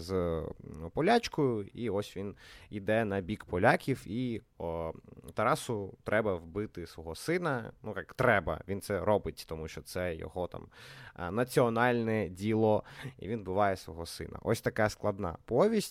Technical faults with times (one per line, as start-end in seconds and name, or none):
none